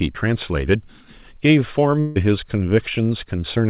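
A long network dropout at 2.0 to 2.18 s is the likely cause of this break. About 160 ms of speech never arrives, and the receiver smears the last sound into a fading buzz, capped at 4 kHz by the G.711 path, until speech resumes past the gap.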